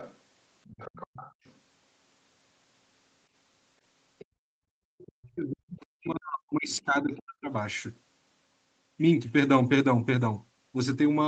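From 0 to 0.17 s and 0.64 to 1.54 s a faint second voice sits some 20 dB under the speech. This is the other side's voice leaking through, likely residual loudspeaker echo, and shows as weak extra harmonic traces on a spectrogram. Fainter scraps return at 4.19 to 4.25, 4.98 to 5.11, 6.73 to 6.82 and 7.2 s. At 4.25 to 4.84 s the background is gated by the echo canceller: the room sound drops by up to about 31 dB, a near-empty gap in the waveform. From 5.12 to 7.51 s the speech is suppressed in double talk, dipping deeply in pieces, likely from the canceller ducking both sides, visible as chopped, hollowed-out speech energy.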